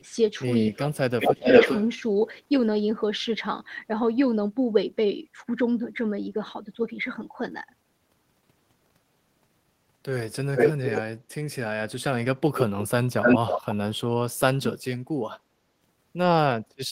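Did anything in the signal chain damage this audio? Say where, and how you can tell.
Yes. The damage sits in call processing. Speech suppressed in double talk appears at 0.73 to 1.48 s and 14.35 to 15.51 s, dipping about 25 dB and then about 40 dB over roughly half a second and a full second. The echo canceller likely clamped the near talker. On the waveform the envelope caves in, and the spectrogram shows faded or missing bands.

Echo leak appears at 1.2 to 1.87 s and 10.55 to 11.02 s with a 406 ms delay, and again at 13.22 to 13.75 s with a 267 ms delay. The copy is noticeably quieter than the direct sound. This likely comes from loudspeaker pickup that the echo canceller did not fully remove. A spectrogram shows faint duplicate harmonic patterns trailing the originals.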